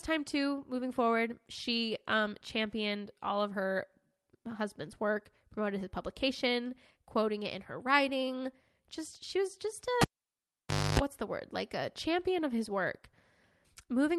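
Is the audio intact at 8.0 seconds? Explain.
Yes, the speech at 8.0 seconds is intact, with no dropout, glitch or other fault at that moment.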